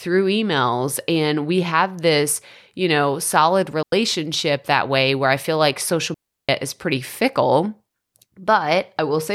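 At 3.83 s the speech drops into a clean hole for about 97 ms, then again at 6.14 to 6.49 s for about 347 ms: a digital wireless dropout, where the link lost too much data and the receiver muted with a quick fade, leaving near silence and no noise bursts.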